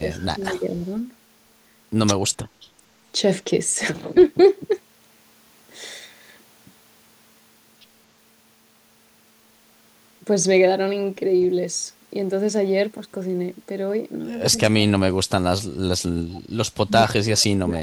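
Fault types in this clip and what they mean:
Speech suppressed in double talk: The voice gets pulled down three times: right at the start up to 0.85 s, again from 14.52 to 15.45 s, and from 16.84 s to the end. The first dip is mild, around 10 dB. The later two go much deeper, roughly 35 dB, so the voice nearly vanishes in pieces. The likely cause is both ends talking at once, with the echo canceller unable to tell the local talker from its own loudspeaker and ducking everything.
Echo leak: There's a brief scrap of a delayed copy of the voice at 16.34 to 16.41 s, trailing the original by 236 ms and sitting about 25 dB below it. So it's faint and short rather than a full repeat. It's likely a bit of loudspeaker sound on the far end that the canceller didn't fully scrub from its microphone, which then got sent back down the line.
Background gated by the echo canceller: Right after that echo scrap, from 16.42 to 16.53 s, the room tone briefly drops by about 10 dB for roughly a tenth of a second and then comes back. 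That's the canceller clamping the microphone hard while the loudspeaker was active and letting go once it decided the coast was clear. You hear it as a quick hole in the background rather than in the voice itself.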